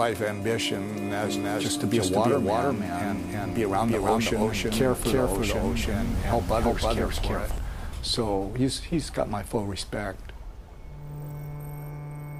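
A doubled audio track runs from 1.24 to 7.58 s: a full-band copy of the sound trails the original by roughly 300 ms at about the same level. It has no decay or room colour and starts and stops abruptly, likely from a second, slower capture path.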